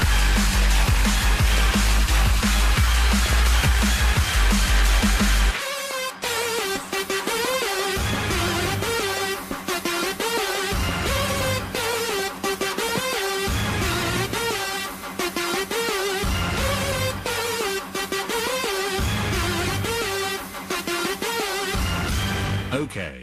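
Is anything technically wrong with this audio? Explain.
Yes. There is DAB burbling in three places: 1.52 to 1.73 s, 3.25 to 3.65 s, and 7.51 to 7.55 s. Weak reception lets bit errors slip past the error correction into the MP2 audio data. Corrupted values then put short blips of noise into individual sub-bands. The result is a watery, bubbling texture. The second patch is the longest. The third is the shortest, and its error rate points to about half that of the other two.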